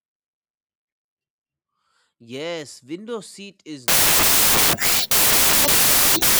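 From 3.88 s to the end, a wrong sample width fault: the speech seems to have been stored as 16-bit samples but read back as packed 24-bit ones. Mismatched bytes merge into loud noise, with the speech buried beneath, running about 1.5 times too fast and high.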